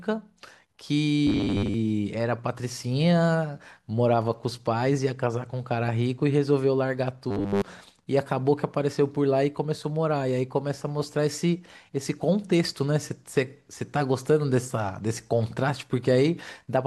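At 1.27 s the speech collapses into robotic sound from repeated short buffers, lasting until 1.74 s, and it comes back from 7.31 to 7.62 s. Both stretches carry a rigid, metallic buzz at 100 Hz that only loosely tracks the words. What's likely happening is audio arriving too late, so a roughly 10 ms chunk gets replayed in place of the real signal. That covers most of the first stretch and essentially all of the second.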